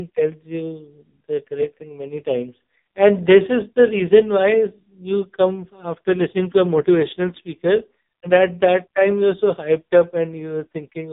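From start to finish the speech sounds buzzy, thin and synthetic, with nothing above 3.8 kHz, the muffled, boxed-in quality of an old mobile call. This is heavy AMR narrowband mobile codec damage. AMR-NB samples at 8 kHz and rebuilds the voice from a vocal-tract model excited by a few pulses per short sub-frame. The harshness points to one of its lowest modes, around 5 kbps, where too few pulses remain to sound natural.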